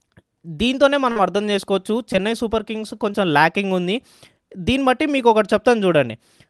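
Short concealed packet loss occurs at 1.11–1.17 s, 2.13–2.15 s and 3.12–3.15 s. Missing audio was patched by extending the preceding sound, leaving brief smeared wobbles.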